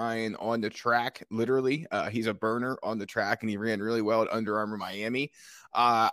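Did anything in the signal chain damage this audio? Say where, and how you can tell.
No, nothing in the chain audibly damaged this speech.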